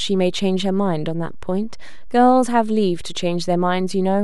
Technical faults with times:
0.00-4.24 DC offset

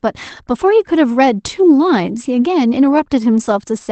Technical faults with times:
none

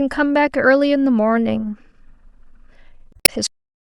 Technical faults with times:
3.10-3.29 damaged data in a compressed stream
3.47-3.84 cut-off end

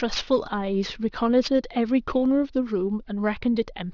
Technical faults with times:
0.00-3.94 aliasing

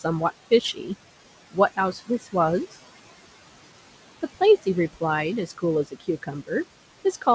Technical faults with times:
0.00-7.35 noise suppressor artifacts
1.76-2.34 speech cut by the noise suppressor
5.47-6.50 speech cut by the noise suppressor

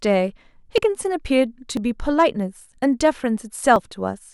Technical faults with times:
0.78 audio missing between chunks
1.77 audio missing between chunks
3.76 audio missing between chunks

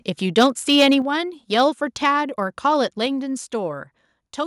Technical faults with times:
0.37-0.94 microphone overload
1.02 microphone volume stepped down
1.59-1.61 microphone overload

